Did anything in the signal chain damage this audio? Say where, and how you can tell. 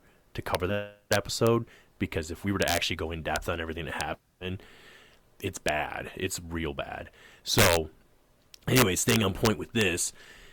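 Yes. A gain or summing stage in sample-format conversion let integer values overflow and wrap to the opposite sign. This produces violent cracks, sharper than clipping, at 0.55, 1.13–1.47 s (just before "because if we were"), 2.62–2.77, 3.36, 4.01 (after "on everything that"), 5.69, 7.59–7.77 and 8.76–9.81 s, with peaks over the limit by up to about 8 dB.

The codec stage dropped whole compressed frames, so the audio jumps ahead. The first jump, at 0.69–0.74 s, skips about 40 ms, which fits two 20 ms frames. The second, at 4.13–4.16 s after "on everything that", skips about 20 ms, one frame.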